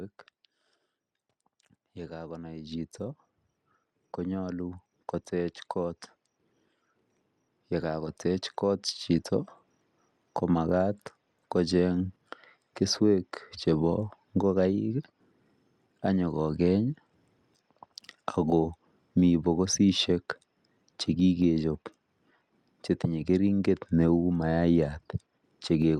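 From 1.94 s to 12.91 s the level climbs steadily as automatic gain rising takes hold. The gain control judged the incoming speech too quiet and kept stepping its gain up, reaching about 16 dB more by the end. Because the whole signal is scaled, the voice and the background noise swell together over these eleven seconds.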